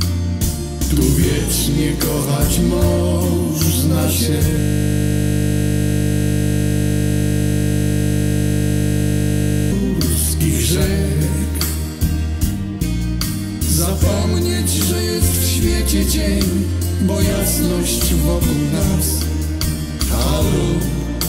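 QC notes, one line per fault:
4.60 to 9.72 s, system hang loop: A 20 ms slice of audio repeats exactly, 256 times in a row, for just over five seconds. The system stalled, but the sound hardware kept replaying the same short ring buffer, about 20 ms long. Because the loop is so short, the repeats fuse into a steady, pitched buzz at 50 Hz rather than a stutter. No new audio comes through until the loop releases at 9.72 s.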